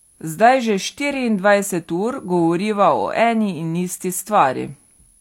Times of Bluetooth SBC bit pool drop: none

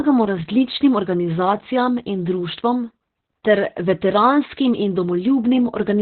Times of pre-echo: none

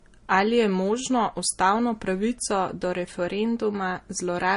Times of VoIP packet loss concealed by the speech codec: none

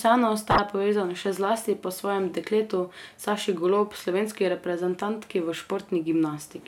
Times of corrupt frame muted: none

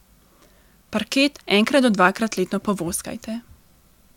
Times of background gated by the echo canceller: none

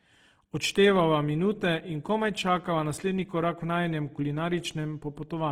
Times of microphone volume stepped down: none

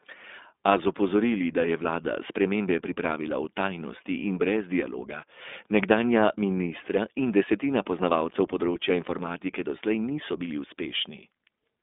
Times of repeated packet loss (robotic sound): none

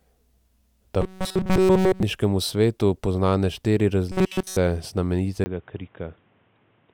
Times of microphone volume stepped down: none

